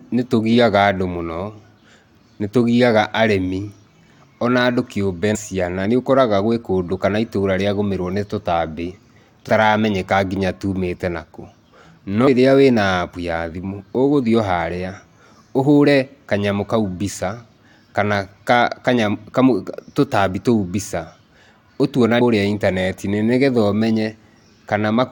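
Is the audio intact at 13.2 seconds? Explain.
Yes, at 13.2 seconds the speech plays through cleanly, with no dropout, glitch or other fault audible at that moment.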